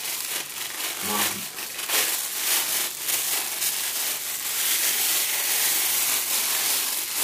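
From start to finish, the sound carries a channel delay (doubling): one channel runs about 43 ms late, which fits a 2048-sample buffer, and the mono sum plays both copies at equal level. That gap is too long for hollow comb filtering, so each onset is heard twice as a single slap rather than a room's decaying tail.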